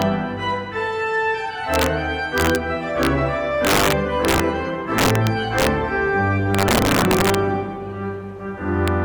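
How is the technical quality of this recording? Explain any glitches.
The recording is marred by repeated integer overflow. Integer overflow occurs at 0.02 s, 1.74–1.86 s, 2.38–2.56 s, 3.03–3.07 s, 3.65–4.40 s, 4.98–5.67 s, 6.55–7.35 s and 8.88 s. Peaks exceeding the integer limit, by up to about 6 dB, wrap to the opposite sign instead of being limited, producing violent, harsh cracks far sharper than ordinary clipping.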